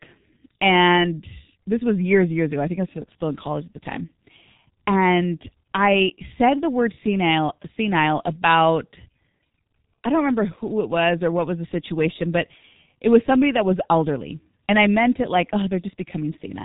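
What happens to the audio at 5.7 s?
At 5.7 s the speech carries the G.723.1 codec damage that runs through the whole clip. Its muffled, hoarse character points to a low-rate telephony coder working around 6 kbit/s. The codec describes the voice with a coarse source model, refreshed only once per 30 ms frame, so consonants smear into one another. Nothing above 3.8 kHz survives, which removes the upper harmonics and sibilance and leaves a dull, heavily degraded band-limited sound.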